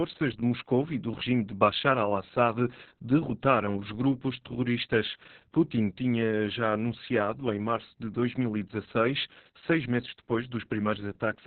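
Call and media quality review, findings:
Opus voice compression, throughout. Muffled, hoarse, slightly robotic speech. Nothing above 4.3 kHz. Narrowband SILK mode with coarse excitation coding, which fits roughly 6 kbps.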